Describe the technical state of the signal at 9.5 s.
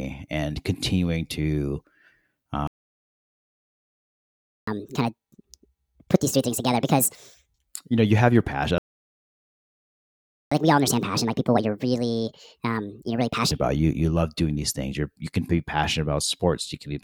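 At 9.5 s the signal is silent, in the middle of a playback stall running from 8.78 to 10.52 s, about 1.73 s, right after "passion i". Most likely the player ran short of data or its thread was blocked. Unlike a brief dropout, the speech halts mid-flow for well over a second before sound returns.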